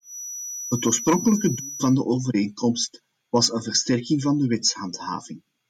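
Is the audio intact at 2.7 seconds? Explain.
Yes, the speech at 2.7 seconds plays through cleanly, with no dropout, click, distortion or other fault at that point.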